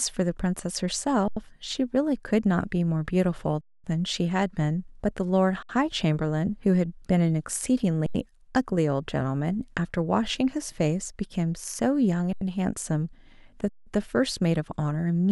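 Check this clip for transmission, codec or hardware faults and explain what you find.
The speech has six underruns with held sample. The output buffer ran dry and the converter held its last value, so the sound stops flat with almost no click. Playback then picks up where it left off, so the return is soft. The gaps fall at 1.28 s (85 ms), 3.61 s (230 ms), 5.63 s (66 ms), 8.06 s (85 ms), 12.33 s (85 ms) and 13.69 s (171 ms). The 85 ms and 171 ms gaps fit whole 4096-sample buffer periods at 48 kHz.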